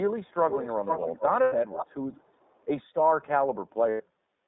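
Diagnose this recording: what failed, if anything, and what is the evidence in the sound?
The codec stage failed. The whole call was carried by the iLBC codec, and its damage is plainly audible. The line is limited to roughly 250 Hz to 3.7 kHz, so the speech sounds thin and boxy, without its upper clarity. There is a slightly rough, synthetic grain throughout, which comes from each 20 ms frame's excitation being coded on its own. The character fits the 15.2 kbps mode.

The next fault is in the call processing at the far end, most likely a loudspeaker whose echo canceller let sound through, which is heard as an echo leak. A delayed copy of the speech comes back in three stretches. From 0.24 to 0.34 s it lags by about 351 ms and is very faint, around 40 dB down. From 0.5 to 1.92 s it lags by 456 ms and is far stronger, only about 10 dB below the speech. From 2.13 to 2.65 s it again lags by 456 ms but is faint.

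The network stage dropped packets, producing lost iLBC frames at 1.42 to 1.54 s and 3.90 to 4.02 s. Each gap lasts 100 ms, which fits five 20 ms frames. The decoder filled each one by repeating the last pitch cycle mixed with noise, so the gap sounds like a held, buzzy vowel. Because every frame decodes independently, the speech recovers almost immediately afterwards. The mild bass roll-off from the microphone's high-pass filter is normal.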